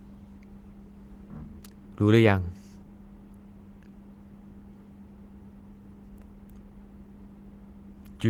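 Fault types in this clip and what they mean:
Nothing in this speech clip stands out as a fault, so there's nothing to list here.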